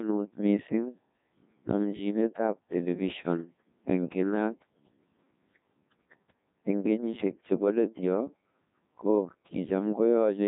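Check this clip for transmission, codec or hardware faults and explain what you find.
One fault runs through the whole clip: the speech has passed through the Codec 2 vocoder.

Throughout, only pitch, voicing, energy and a coarse spectral envelope survive transmission, so the decoder rebuilds the speech from sine waves instead of the original waveform. The result, at 1.6 kbit/s, is heavily robotic and buzzy, with nothing above 3.8 kHz.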